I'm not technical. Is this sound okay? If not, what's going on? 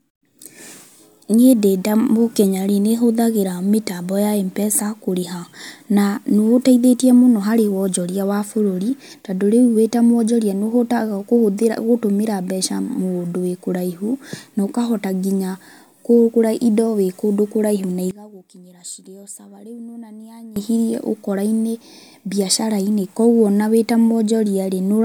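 No. From 18.11 to 20.56 seconds the speech drops sharply and turns faint. That points to one channel inverted: one side of the stereo likely has its polarity flipped, so the shared, centred part of the sound cancels out when both sides combine.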